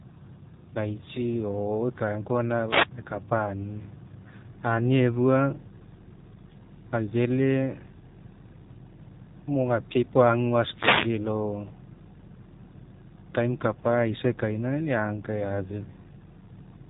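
Speech, passed through an AMR narrowband mobile codec for the whole clip: nothing survives above 4 kHz, so a spectrogram shows a flat ceiling there, and the low bitrate leaves a buzzy, synthetic quality whose plainly audible damage fits a low mode near 7.4 kbps.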